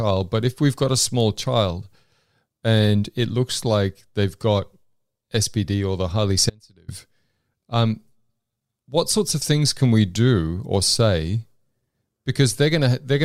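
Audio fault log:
6.50–6.88 s, audio dropout to a faint residue: after "or the highly" the speech cuts out abruptly for 0.38 s to a faint leak roughly 30 dB down, likely a brief signal loss on a still-live path. Its instant edges distinguish it from a pause or fade.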